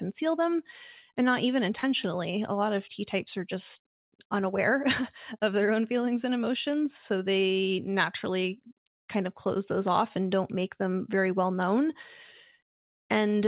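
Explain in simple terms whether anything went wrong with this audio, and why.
Around 1.79 to 1.84 s the speech briefly smears or wobbles for a fraction of a second, and a short sound there may seem to blur or drop out. This is short concealed packet loss. About 40 milliseconds of the call arrived too late to be played, so the receiving end covered the gap by stretching out the sound just before it and then blended back into the real speech. The whole clip also lacks sharpness above 4 kHz, which is how this phone-style call codec carries audio.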